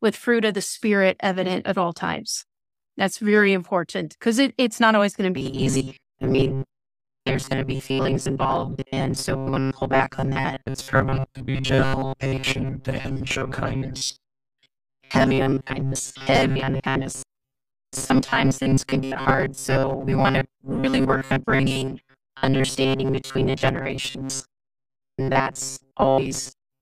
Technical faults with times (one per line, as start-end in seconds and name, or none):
5.36-26.82 robotic sound from repeated short buffers